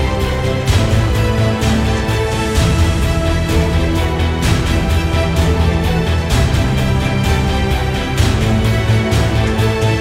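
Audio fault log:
No fault in this audio.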